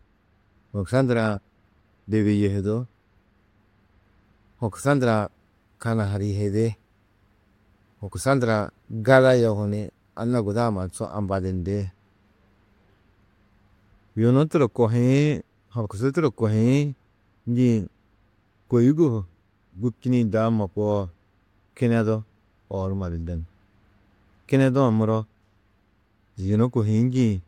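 Nothing goes wrong anywhere in this bit of speech, so there's no fault here to describe.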